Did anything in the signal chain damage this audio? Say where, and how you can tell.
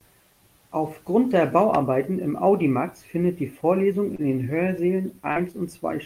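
Yes. The damage comes from the network and the receiver's jitter buffer. There are two short stalls from a late packet, at 4.15–4.22 s and 5.01–5.07 s. Each time, the buffer ran dry, and the receiver held the last sound for 31 ms and then 21 ms until the packet arrived. Playback then resumed from the same spot, adding that much delay but dropping nothing. On a spectrogram the harmonics run frozen and flat across each gap, and the waveform repeats one cycle over and over.

There is also a short concealed packet loss at 5.32–5.39 s. Here about 40 ms of the call never reached the decoder in time, so the receiver filled 41 ms by extrapolating from the preceding sound and then crossfaded back into the real signal. You hear a brief smear in the speech. On a spectrogram the band looks blurred and unnaturally steady.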